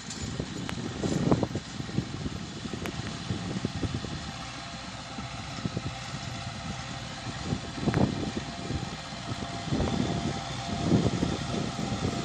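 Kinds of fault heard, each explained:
Loud pop: at 0.69 to 0.72 s, as a double pop between 2.86 and 3.09 s, and again at 7.94 to 7.96 s, a sharp burst jumps out at roughly 20 dB above the surrounding sound, which carries on underneath each one. The likely cause is a sudden voltage step or spike, from a connector, switch, static discharge or driver glitch, entering the signal path. Later stages shape that jolt into the brief thump heard here.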